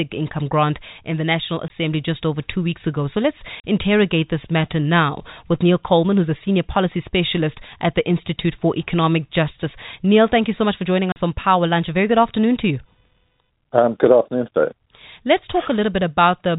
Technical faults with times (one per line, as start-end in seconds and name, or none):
1.68-1.70 packet loss filled with silence
3.60-3.64 packet loss filled with silence
11.12-11.16 packet loss filled with silence